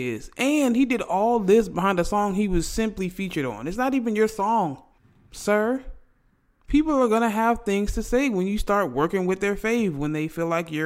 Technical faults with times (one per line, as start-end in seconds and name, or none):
none